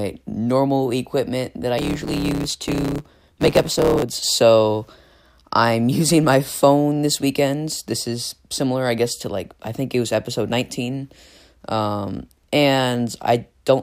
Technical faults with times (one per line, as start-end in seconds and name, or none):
1.77-4.03 block size mismatch (truncated)